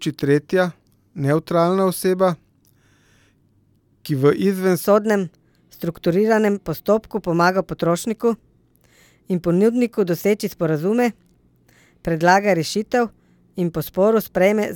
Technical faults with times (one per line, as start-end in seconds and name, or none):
4.84-14.76 section at the wrong speed